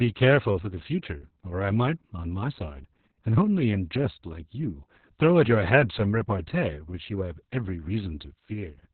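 Speech, and the whole of it carries heavy Opus voice compression: nothing survives above about 4.2 kHz, so the sound is narrowband and muffled, and the voice turns hoarse and slightly robotic because the SILK coder is rebuilding its excitation very coarsely, which fits a bitrate near 6 kbps. A plain low-pass or telephone-band filter would dull the top end just as much but leave the voicing smooth; the gritty, buzzing texture is what marks this as codec damage.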